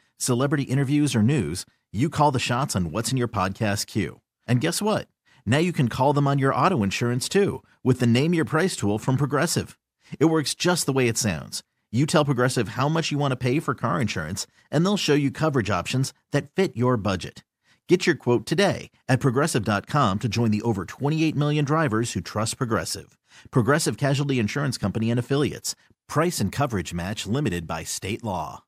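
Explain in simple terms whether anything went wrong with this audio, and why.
Nothing went wrong here; the speech comes across steady and even the whole way, with no spots where the sound breaks up, jumps or drops out.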